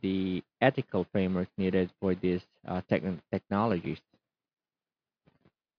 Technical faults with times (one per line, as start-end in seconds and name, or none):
none